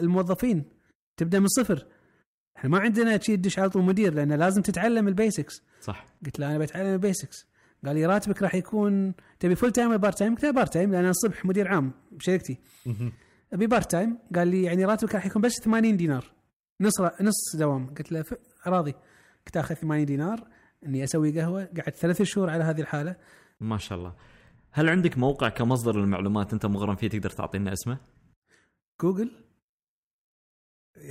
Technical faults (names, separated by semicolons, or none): none